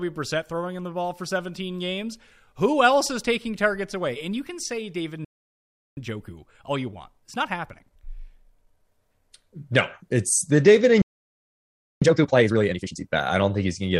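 The speech cuts out abruptly at 5.25 s and stays silent for 0.72 s, a playback stall likely caused by the player running short of data or having its thread blocked. A second, roughly one-second stall follows from 11.02 to 12.02 s. After each gap the speech resumes hurried but at its normal pitch. This is time-compressed catch-up, in which the player trims its backlog by removing small slices and cross-fading across the joins. From 5.97 to 8.85 s it runs at 1.25 times speed, and from 12.02 to 13.00 s at double speed.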